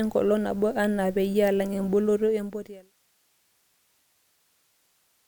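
There are no technical faults to describe in this speech, and the smooth fade-out from around 2 s to 2.94 s is a deliberate editorial ending rather than a problem.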